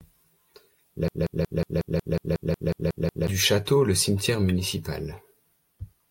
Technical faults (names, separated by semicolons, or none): broken-record loop